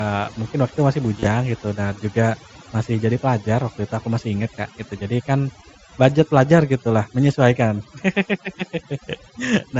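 Overdone noise removal runs through the whole speech clip. The reduction is set so aggressively that frequency bands near the estimated noise floor are cut almost entirely, along with quieter parts of the voice. The background drops and breaks up into twinkling specks.

From 1.17 to 1.27 s there is concealed Bluetooth headset packet loss. About 52 ms of audio is missing, spread across a 90 ms stretch, and the longest continuous gap is 30 ms. The receiver fills each gap by repeating recent waveform, which produces a brief buzzy tone and a slight warble when real audio resumes. This all happens over the mSBC headset link, which carries the speech at wideband.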